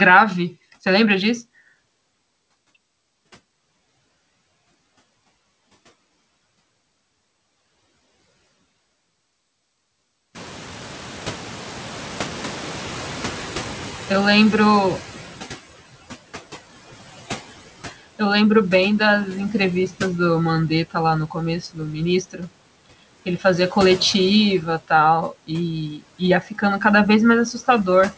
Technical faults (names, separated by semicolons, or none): noise suppressor artifacts; noise suppressor catching up; speech cut by the noise suppressor